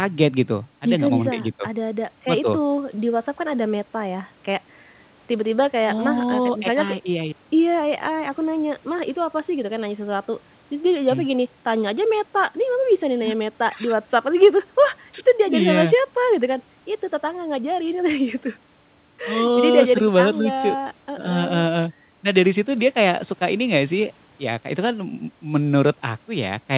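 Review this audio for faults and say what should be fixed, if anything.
Nothing needs fixing; no faults are audible here.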